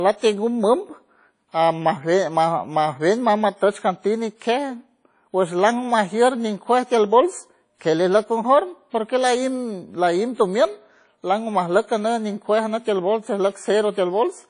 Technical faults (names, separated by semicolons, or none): WMA compression